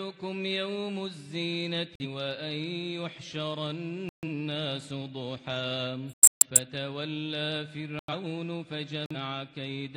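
Five abrupt silent holes cut through the audio: 1.94 to 2.06 s, 4.09 to 4.24 s, 6.10 to 6.57 s, 7.99 to 8.14 s, and 9.06 to 9.16 s. Each is a corrupt frame muted. Damaged bits made the decoder reject whole compressed frames, and the player filled the gap with silence. Four of the holes run about 0.1 to 0.15 s, which suggests a few frames each. The 6.10 s gap is nearly half a second. Timing stays intact.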